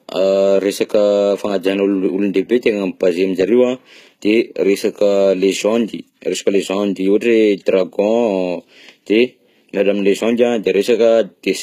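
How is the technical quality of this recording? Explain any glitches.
The recording carries plainly audible coding damage throughout. HE-AAC compression, likely at a low bitrate around 20 kbps, runs the whole way: treble is rebuilt by copying lower bands upward, so harmonics misalign and s sounds turn gritty and lispy, with nothing above 14.9 kHz.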